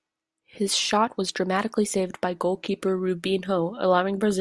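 There are no technical faults to describe at any point in the speech.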